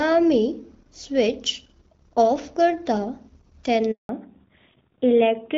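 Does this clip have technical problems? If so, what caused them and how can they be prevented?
Yes. A handover gap runs from 3.91 to 4.09 s: the speech fades within a few tens of milliseconds and leaves 180 ms of silence while the call switches networks. Unlike a jitter dropout, the gap is clean rather than smeared by concealment, and the sound changes after it. Keeping the call on one network, or using make-before-break handover, would prevent it.

A fallback to narrowband follows at 4.09 s and lasts to the end. Before this point the HD Voice sound is clear, with light coding, which fits the 12.65 kbit/s wideband mode. After it, nothing above 4 kHz remains and the voice sounds duller and rougher. A simple low-pass filter would not add that coarse texture, and the change coincides with the handover. Keeping HD Voice supported on both networks would prevent it.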